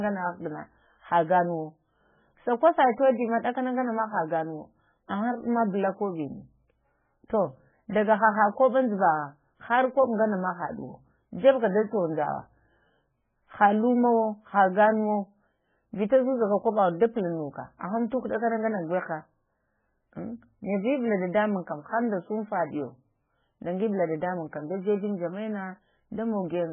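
From start to finish the speech carries heavy MP3 compression damage. Nothing survives above about 3.5 kHz, so the sound is dull and boxed-in, and the s sounds turn into metallic chirps. The sound has a watery, swirling texture as weak frequency lines drop in and out from frame to frame. What sets this apart from a plain low-pass filter is that shifting swirl. The starvation points to a bitrate near 9 kbps, likely from an encoder starved of bits.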